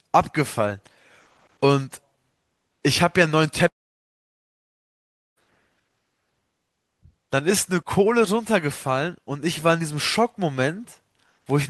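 At 3.67 s the speech dies into a fading buzz, then silence until 5.38 s, a long network dropout, likely lost packets, with about 1.7 s never heard.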